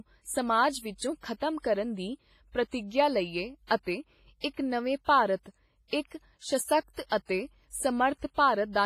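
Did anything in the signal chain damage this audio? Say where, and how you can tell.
Yes, at the codec stage. Throughout, the speech carries heavy transform-codec damage: a ringing, washy texture, hiss that swells and fades with the signal, and nothing above 15.3 kHz. The likely cause is WMA compression, and the degree of damage points to a low bitrate around 24 kbps.

Pre-echo appears from 4.41 to 4.44 s, just before "ਇੱਕ ਨਵੇਂ ਭਾਰਤ ਇੱਕ". A short hiss runs about 33 ms ahead of the onset, which sounds softened. The encoder sized its quantisation noise for the loud attack and spread it across the quiet start of the block.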